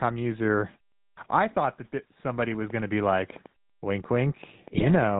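Throughout, the speech carries the character of the GSM full-rate codec: a buzzy, gravelly roughness and no content above about 4 kHz, which fits the 13 kbps full-rate coder. That codec models the vocal tract as a filter and excites it with a regular pulse train built from only every third excitation sample, so fine detail in the excitation is replaced by a coarse periodic buzz. The damage is plainly audible across the whole clip.

At 1.11 s, after a pause of about 0.4 s, there is a clipped start after a pause: roughly 62 ms of onset is swallowed before "I thought that", so the phrase begins abruptly without its first sounds. The output device has dropped into a low-power or unlocked state during the silence and takes that long to wake and resume passing audio. The same thing happens at 3.76 s, after a pause of about 0.3 s, where a further 63 ms of onset is lost.

From 4.74 to 4.83 s, GSM bit errors break up the sound into a brief burst of squawking, popping and gargling. 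Corrupted bits in the received stream have reached the decoder and scrambled its filter, pitch and gain parameters, bending the spectrum and throwing the level around for a handful of frames. The error rate here points to roughly 3% of bits flipped, consistent with a weak radio link.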